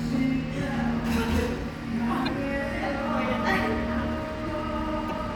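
At 2.24 to 2.29 s and again at 5.06 to 5.11 s there's a short glitch from damaged data in the compressed stream. The decoder hit corrupted frames, lost sync for about 56 ms, then locked back onto the next valid frame header.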